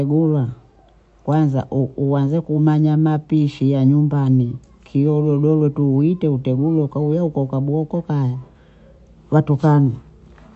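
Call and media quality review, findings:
MP3 compression, throughout, 0 to end. Treble stops dead at 8 kHz: dull, band-limited speech. Plainly audible watery, swirly texture on sibilants; weak spectral detail flickering frame to frame. Consonant attacks smeared. Likely a low-bitrate MP3 encode, roughly consistent with 48 kbps, where the encoder starved of bits drops everything above the cutoff and zeroes quiet frequency lines.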